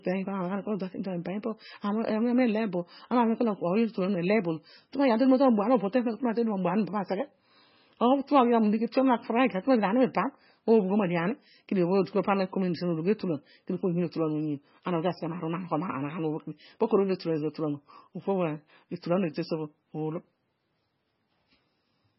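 MP3 compression, heard throughout, is the likely cause: nothing reaches above 5.6 kHz, where the encoder cut the treble, and weak frequency lines flicker between frames, leaving heavily watery, swirly speech with chirpy s sounds, which fits a bitrate around 16 kbps.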